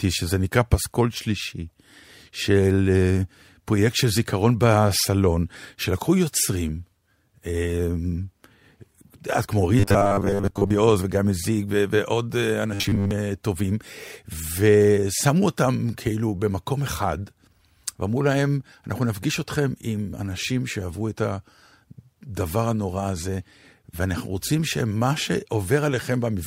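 Robotic sound from repeated short buffers at 9.79 to 10.70 s and 12.74 to 13.11 s: the speech becomes a metallic 100 Hz buzz, likely from roughly 10 ms chunks repeated for most of each stretch.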